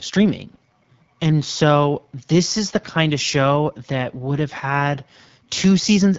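From start to finish the speech has passed through the AMR wideband (HD Voice) codec at a very low rate. The coding damage is plain, and the roughness fits an 8.85 kbit/s mode, one of the codec's lowest. At that rate the vocal tract model and its pulse excitation are too coarse to follow the voice closely, so the speech turns rough and raspy. The band above 6.4 kHz is only shaped noise, and nothing at all reaches past 7.5 kHz.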